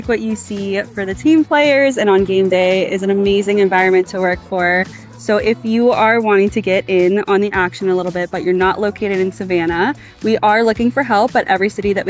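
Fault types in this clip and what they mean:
No audible faults appear anywhere in this recording.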